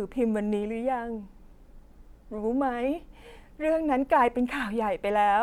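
Nothing technically wrong turns up anywhere in this short bit of speech, so there's no fault to point at.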